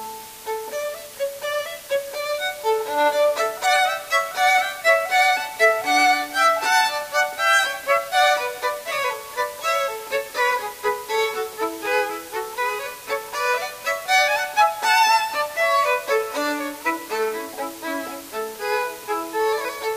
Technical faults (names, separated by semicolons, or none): low bit depth with dither